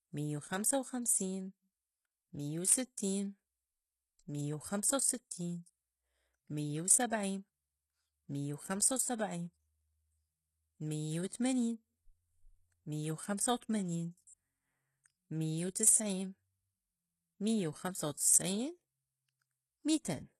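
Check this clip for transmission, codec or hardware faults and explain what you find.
One codec fault runs through the whole clip, from start to finish. The likely cause is HE-AAC compression: only the lower spectrum is coded and the treble is rebuilt by copying lower bands upward, so s sounds turn gritty and lispy, nothing sounds above 12.3 kHz, and the plainly audible damage fits a bitrate around 16 kbps.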